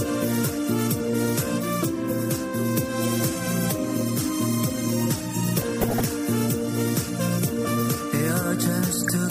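The audio carries MP2 compression throughout: it sounds dull and plainly gurgling, with a granular roughness on what remains. That is most likely a bitrate that fits roughly 80 kbps, too low for MPEG Layer II to keep all of its 32 sub-bands running. On a spectrogram the upper region looks ragged, with high bands blinking on and off in blocky time slices rather than fading smoothly. Two bursts of DAB burbling sit on top of this, from 5.60 to 6.05 s and from 8.90 to 9.10 s. Each is a patch of short noise blips in single sub-bands, which points to reception errors at around half a percent slipping through error correction and corrupting sub-band samples and scale factors. On a spectrogram these show as short isolated specks of noise confined to single bands, and the waveform shows short irregular bulges in amplitude across both stretches.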